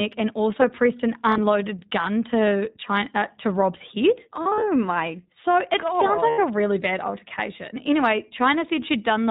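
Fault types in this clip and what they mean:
iLBC codec: The speech went through a narrowband VoIP codec that codes each frame independently, and the sound fits its 20 ms, 15.2 kbps mode. Nothing above 4 kHz survives, and the voice comes out plainly rough and synthetic throughout.
lost iLBC frames: About 60 ms of packets went missing from 1.30 to 1.39 s, between "and also pressed an" and "gun to". The decoder filled the gap by repeating the last pitch cycle mixed with noise, heard as a brief, buzzy held vowel before the voice snaps back.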